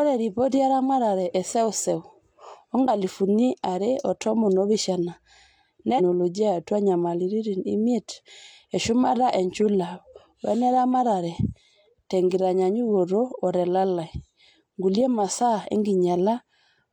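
At 5.95 to 6.01 s the speech jumps forward abruptly, with a short blip at the join, and the sentence resumes from a later point. This is likely a stream segment skipped: one chunk of a segmented stream failed to load and the player carried on with the next. Unlike a dropout, which leaves a silent hole and then continues where it stopped, here no gap is heard. Instead, part of the programme is missing across a splice.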